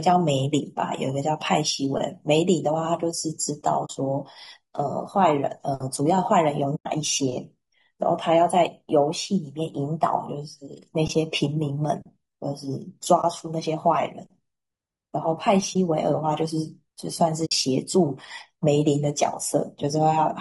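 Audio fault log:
Throughout: low-delay AAC compression. The speech is plainly rough and grainy, with noise filling the gaps between pitch harmonics and a thin, somewhat synthetic top band. The likely cause is a low-delay coder of the AAC-ELD kind, running at a rate that fits roughly 32 kbps. At so low a rate the bits run out, so the coarse quantisation lets noise in between the harmonics.
3.85–3.90 s, 6.75–6.86 s, 13.21–13.24 s, 15.73–15.76 s, 17.45–17.52 s: AAC frame loss with muting. The sound dips or drops into short holes lasting about 40, 100, 20, 20 and 60 ms. These lengths fit whole 20 ms frames going missing. The decoder zeroes the missing spectrum, and the overlapping windows fade the audio out and back in around each gap. That is why the holes have soft edges.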